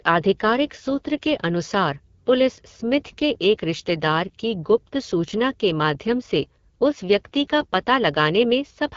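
Throughout the clip the speech has passed through the AMR wideband (HD Voice) codec at a very low rate, which fits its 8.85 kbit/s mode. Too few bits reach the pulse-driven vocal tract model, so the voice turns rough and raspy, with nothing above 7.5 kHz.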